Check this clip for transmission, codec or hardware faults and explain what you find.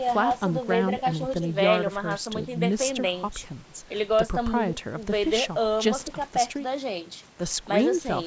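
No faults found in the speech: the band stops at 8 kHz and the lowest bass is rolled off, both normal results of call microphone processing.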